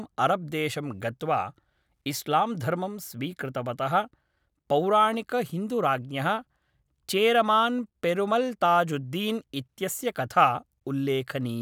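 Nothing here calls for comment, since the speech runs along without any technical fault turning up anywhere in the recording.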